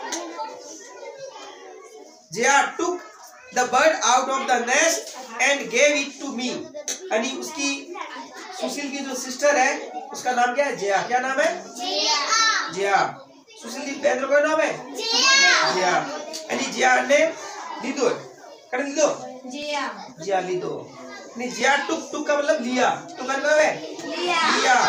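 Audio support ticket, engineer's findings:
Periodic USB or driver dropouts, 19.63 to 23.60 s: regular ticks every 1.99 s, around three, each skipping roughly 10 ms of audio with no gap left. Waveform shows abrupt splice discontinuities; spectrogram shows evenly spaced thin broadband vertical lines. A background task is stalling the USB bus or audio driver.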